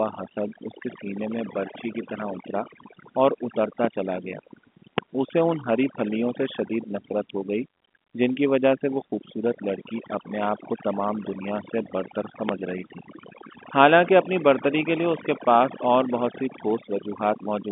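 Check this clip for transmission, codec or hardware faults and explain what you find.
There's one fault, overdone noise removal, running through the whole speech clip. The suppressor is set too aggressively, switching off individual frequency bands near its noise estimate. That leaves near-silent gaps with twinkling specks, and quiet parts of the voice go with them. The telephone band itself, with nothing above about 3.7 kHz, sounds like ordinary G.711 telephone coding.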